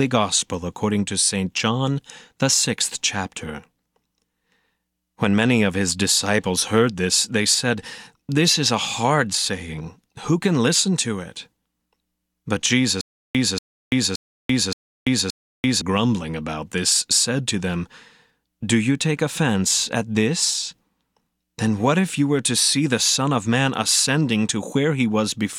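From 13.01 s to 15.82 s a 235 ms fragment replays five times, each followed by 338 ms of digital silence in a steady 573 ms cycle, just before "grumbling about this said". This stutter with silent gaps likely comes from a stalled stream retrying its last fragment, and the audio between is lost.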